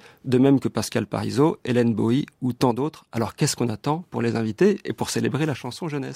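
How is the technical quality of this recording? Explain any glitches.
The speech has two brief level drops. From 2.71 to 3.17 s, after "ou tant", and from 5.55 s to the end, after "les inviter et pour", the sound falls abruptly by about 6 dB. This is likely one channel drops out, halving the shared signal in the mono sum.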